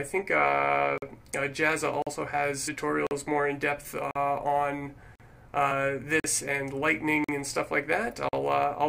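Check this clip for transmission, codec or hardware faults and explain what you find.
Two faults are present: regular chunk gaps and one burst of damaged compressed data.

Gaps between chunks occur at 0.98, 2.02, 3.07, 4.11, 5.15, 6.20, 7.24 and 8.29 s: 44 ms silent holes after each 1 s chunk, visible as clean vertical blank stripes with hard edges.

Damaged data in a compressed stream at 2.67 s makes the decoder lose sync, giving a brief glitch.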